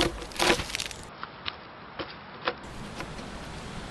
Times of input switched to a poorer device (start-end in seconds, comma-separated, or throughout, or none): 1.09-2.64